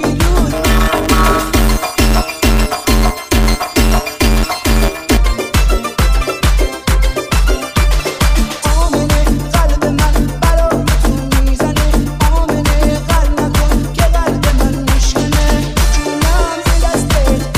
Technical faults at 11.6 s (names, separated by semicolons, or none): none